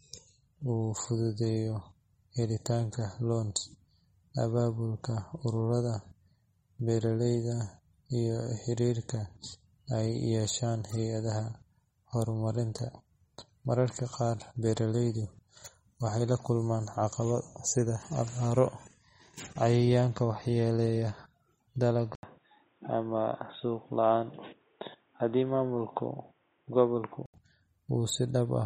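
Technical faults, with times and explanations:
Throughout: MP3 compression. Nothing remains above 15.8 kHz, and the codec damage is plainly audible. That points to a low bitrate, with about 32 kbps being likely. With so few bits the encoder cuts the treble at a fixed frequency and drops quieter spectral lines. Those lines flicker in and out from frame to frame, so the speech takes on a watery, swirling texture. Sibilants turn metallic and chirpy, and consonant attacks lose their sharpness.
22.15 to 27.34 s: input switched to a poorer device. The audio drops out for about 80 ms at the switch. After that, nothing is present above 3.8 kHz, so the speech sounds dull and boxy, much like a headset call profile. The level stays about the same, but a new noise floor appears, roughly 40 dB below the speech. The narrow band and changed tone suggest the recording was most likely moved to a lower-grade microphone path.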